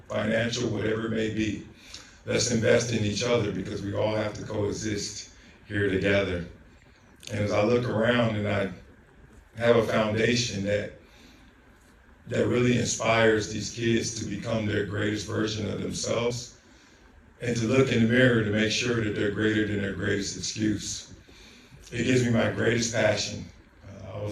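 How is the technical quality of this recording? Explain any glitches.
The recording has one glitch, at 16.30 s, where compressed frames are skipped. A single decoded frame, which fits a 32 ms frame length, never plays, so the audio jumps ahead by about 30 ms. The skip is heard as a brief break where the audio jumps forward. On a waveform the envelope shifts abruptly, and a spectrogram shows a thin vertical seam where harmonic lines break and resume slightly offset.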